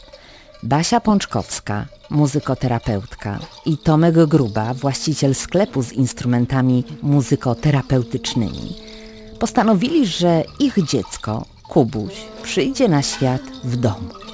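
No dropouts, clicks, clipping, distortion or level jumps can be heard anywhere in this audio, and the signal holds steady throughout.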